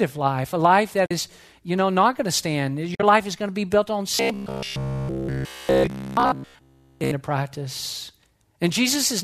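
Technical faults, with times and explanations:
1.06–1.11 s and 2.95–3.03 s: AAC frame loss with muting. The first gap of about 50 ms follows "life a life that". The second follows "not going to stand" and spreads about 60 ms of loss over 80 ms. The decoder zeroes the missing spectrum, and the overlapping windows fade the sound out and back in, leaving soft-edged holes.
4.15–7.11 s: robotic sound from repeated short buffers, beginning after "to be built on". Across essentially the whole stretch, the voice turns into a rigid metallic buzz at 66.7 Hz. That rate corresponds to a 15 ms period, likely from one 15 ms buffer being replayed while fresh audio is skipped.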